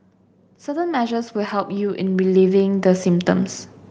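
Automatic gain rising sets in at 0.65 s: the gain control judged the incoming level too low and began turning its gain up, climbing by about 14 dB until 3.58 s. Because the boost is applied to the whole signal, the speech and the background noise swell together over those three seconds, so the recording seems to drift steadily closer and louder, with the room noise growing in step rather than the speaker simply raising their voice.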